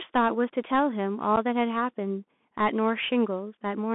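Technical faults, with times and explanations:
throughout Bluetooth CVSD headset codec: the audio passed through the narrowband one-bit delta codec of a 64 kbps headset link, so nothing survives above about 3.5 kHz or below about 200 Hz, and the adaptive step audibly lags, leaving scratchy sibilants, distorted loud peaks and a granular hiss beneath the speech.
1.36 s unconcealed Bluetooth headset packet loss: a single packet between headset and phone went missing, and nothing filled the gap, so the speech drops out for about 7.5 ms with hard edges that can click, then returns briefly quieter as the codec's step size rebuilds.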